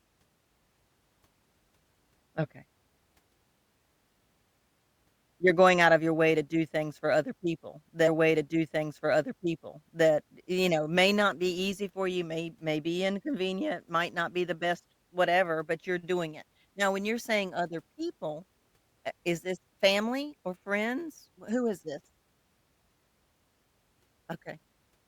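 At 8.07 s, after "things for other people", a stream segment is repeated. The player queued the same chunk twice. Two seconds of speech play again until 10.07 s, with a small blip at the jump back. Then "you know may not" follows.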